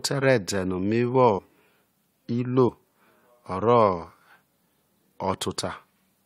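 At 1.37 s, 2.68 s and 4.53 s the speech jumps forward, a sign of compressed frames skipped: whole coded frames were lost or rejected by the decoder, so their audio never plays. The gaps sound like roughly 100 ms, about 70 ms and roughly 100 ms missing, which fits a few frames of about 21.3 ms each.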